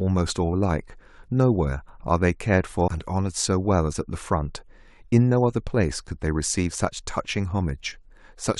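Damaged data in the compressed stream hits twice in this speech, at 0.52 s and again at 2.87 s. At each point some of the encoded bytes are wrong, so the decoder can't read the affected frames properly and loses its place in the stream until it locks onto the next valid frame header. Each fault is heard as a brief glitch lasting only about one to two hundredths of a second before the speech resumes.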